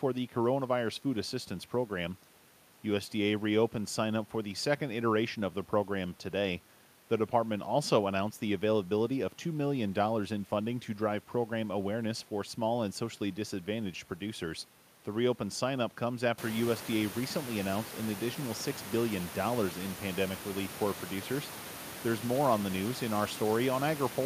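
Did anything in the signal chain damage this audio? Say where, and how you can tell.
No, nothing in the chain has damaged this speech; the only change is the room's own background noise, which rises by about 17 dB at around 16.5 s yet stays about 14 dB below the speech, and that belongs to the acoustic recording rather than to any stage of the signal path.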